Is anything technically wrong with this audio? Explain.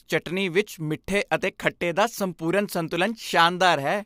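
No, nothing technically wrong turns up anywhere in this bit of speech, so there's nothing here to flag.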